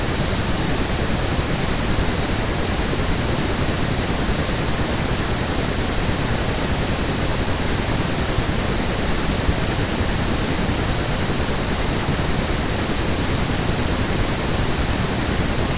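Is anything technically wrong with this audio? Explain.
No, nothing is wrong: the speech has come through a WebRTC call path, and the absence of anything above 4 kHz is consistent with the narrowband G.711 A-law codec that the sound points to.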